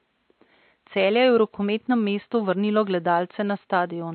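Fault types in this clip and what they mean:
AAC compression: The speech sounds dull and smeared throughout, with plainly audible damage: a fizzy, warbling texture on sibilants and sustained vowels, and a lowered top end where the highest frequencies drop away. This is likely the result of AAC-LC coding at a low rate, consistent with about 32 kbps, where quantising each frame's spectrum leaves gaps and substitute noise in the upper bands. The room noise, about 53 dB below the speech, is quiet.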